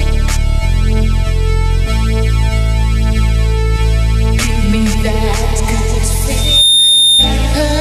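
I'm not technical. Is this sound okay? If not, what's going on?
No. From 6.37 to 7.38 s a piercing whistle near 3.6 kHz swells up within a fraction of a second: loudspeaker feedback squeal, where the microphone re-amplifies its own loudspeaker.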